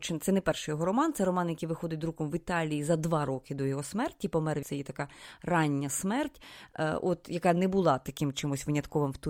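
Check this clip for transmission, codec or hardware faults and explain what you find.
One fault, at 4.62 s: the speech jumps abruptly forward with a small blip, as if a stretch had gone missing. The likely cause is a stream segment skipped, where one chunk of the segmented stream failed to load and the player continued with the next.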